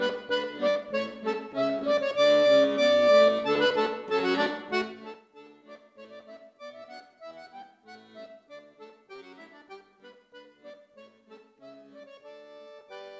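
At 0.70 to 0.77 s there is a burst of packet loss: about 60 ms of audio never arrived, and the receiver held the preceding sound for roughly 55 ms while fading it. This gives an audible held buzz or fading hiss before the audio jumps ahead. The skip and the sustained tail set it apart from the shorter dropouts.

Short concealed packet loss follows at 1.79 to 1.95 s, 4.32 to 4.36 s and 9.16 to 9.20 s. Each loses about 20 ms, patched with 12 to 20 ms of extrapolated sound that blends back in, heard as a brief smear or wobble rather than a held tail. At 1.79 s the fill also stretches timing by roughly 15 ms. All of this sits on the G.722 call path, which carries nothing above 8 kHz.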